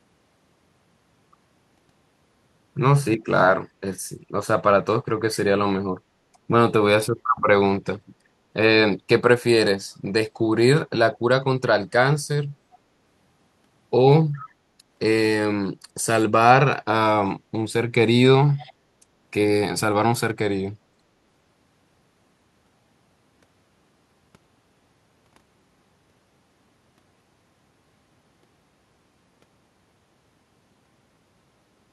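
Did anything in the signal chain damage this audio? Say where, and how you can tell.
Yes, in call processing: brief copies of the speech return 403 ms late at 11.14, 12.72, 14.37 and 18.58 s, likely an echo leak past an echo canceller.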